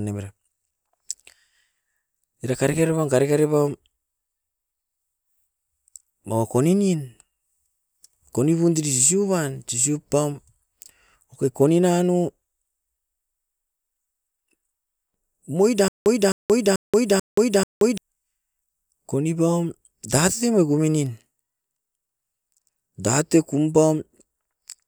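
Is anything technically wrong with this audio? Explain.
Yes. From 15.88 to 17.98 s there is a stutter with silent gaps: a 260 ms fragment of speech repeats five times, each followed by about 178 ms of digital silence, giving a steady 438 ms cycle. The likely cause is a stalled player or stream replaying its last buffered chunk at each retry, and the speech that should have played during this span is lost. The dead-silent gap after every repeat distinguishes it from a seamless loop or a simple one-off dropout.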